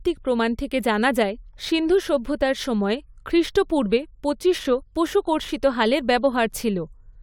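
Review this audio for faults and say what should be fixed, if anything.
Nothing needs fixing: the speech signal stays technically intact throughout, with no audible faults to correct.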